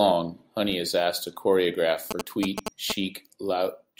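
After "is asked to choreograph", GSM signalling bursts run from 2.11 to 2.92 s. A nearby 2G phone's radio pulses are rectified. Galloping 217 Hz buzzes sit near speech level.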